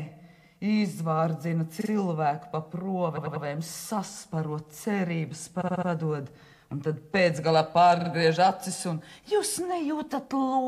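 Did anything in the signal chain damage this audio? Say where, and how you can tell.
Yes: stutters at 1.80, 3.16, 5.60 and 7.99 s replay 46 to 93 ms blocks, repeated frames written more than once at the codec or storage stage.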